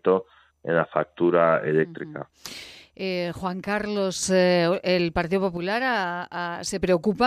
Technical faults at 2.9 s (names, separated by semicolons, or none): one channel drops out